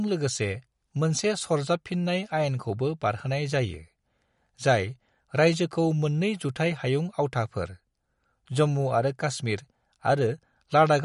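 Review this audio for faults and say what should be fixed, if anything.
Across the whole clip the speech has a watery, swirling texture, with chirpy metallic edges on s sounds and softened consonant attacks, and nothing is heard above 11.2 kHz. This is likely MP3 compression at a low bitrate, consistent with roughly 50 kbps: short of bits, the encoder cuts the treble at a fixed point and drops quieter frequency components that then flicker in and out between frames. To prevent it, keep the recording in a lossless format or encode MP3 at a substantially higher bitrate.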